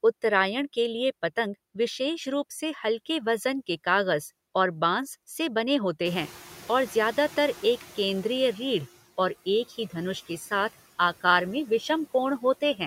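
Around 6 seconds the room noise jumps by about 20 dB, and the noise suppressor catching up is heard from 6.05 to 8.89 s: its estimate lags, so the noise comes through with less reduction at first, then sinks by about 10 dB over those 2.8 seconds.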